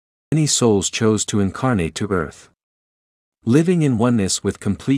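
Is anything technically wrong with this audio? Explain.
Yes. There is a cut-off start: the capture began late, so the first 0.32 s is digital silence and the speech then enters mid-sound at 0.32 s, just before "souls chose to incarnate", with no natural attack or onset, an abrupt jump from nothing into ongoing sound.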